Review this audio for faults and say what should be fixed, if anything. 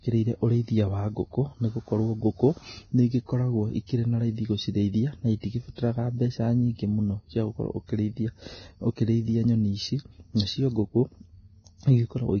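Vorbis compression, likely the cause of the heavy codec damage heard throughout: the speech has nothing above 6.5 kHz, and the remaining treble is coarsely quantised into grainy hiss with roughened tones. That fits a low bitrate around 18 kbps. Prevent it by encoding at a higher quality setting or using a lossless format.

Pre-echo occurs at 3.87 s (about 27 ms), 5.40 s (about 33 ms) and 5.76 s (about 24 ms). Quantisation noise spread across each transform block fills the quiet moment before a sharp attack, so a short hiss precedes it and the onset smears. Prevent it with a higher bitrate or an encoder that switches to shorter blocks on transients.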